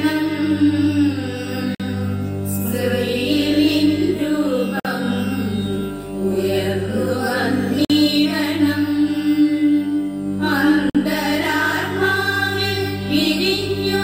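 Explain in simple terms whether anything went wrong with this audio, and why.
A gap between chunks occurred: the audio arrived in 3-second pieces with silence left between them, causing 50 ms holes at 1.75, 4.80, 7.85 and 10.90 seconds.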